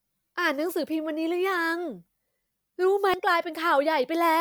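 At 3.14 s the speech is interrupted by a brief glitch, the mark of damaged data in a compressed stream. Part of the encoded bitstream was corrupted, so the decoder misread the frame there, lost sync and had to search for the next valid frame header before carrying on.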